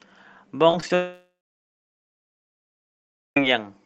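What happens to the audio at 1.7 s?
At 1.7 s the sound is in a long network dropout running from 0.95 to 3.37 s. After a brief fading buzz that extends the last audio, only silence remains until the sound resumes, with the lost stretch likely never received and never recovered.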